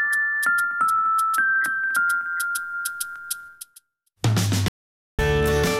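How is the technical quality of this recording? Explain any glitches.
There is one glitch, an audio dropout to silence from 4.68 to 5.19 s. The sound cuts off abruptly into about half a second of dead silence with no room tone, then resumes mid-flow. The likely cause is the input being briefly lost, with silence written in its place.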